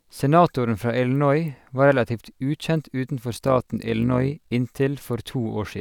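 From 3.32 to 4.51 s the speech carries overlap-add ripple: the signal was split into windowed frames and rejoined with an overlap whose window gains don't sum evenly, so the level swells and dips once per frame, by about 6 dB, at around 50 Hz. It sounds like a buzzy, robotic flutter. On the waveform the envelope shows regular scalloping; a spectrogram shows vertical banding repeating at that frame rate.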